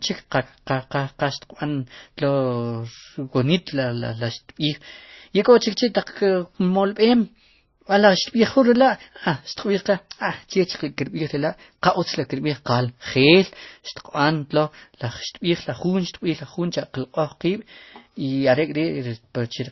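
Transcoding between lossy codecs affects this speech throughout: nothing remains above 5.9 kHz, and smeared low-rate artefacts layer under fresh ones, likely from a low-bitrate MP3 re-encoded to Opus.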